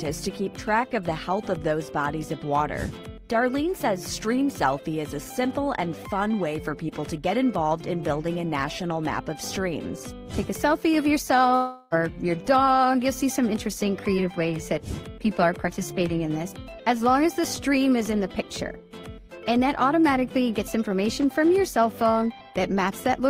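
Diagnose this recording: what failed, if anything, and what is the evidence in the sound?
The likely cause is a long network dropout at the transport stage: from 11.55 to 11.95 s the sound turns into a fading buzz as the receiver stretches its last audio across roughly 360 ms of lost packets. On a spectrogram this shows as smeared, repeating bands that thin out before normal audio resumes, with the lost stretch simply absent.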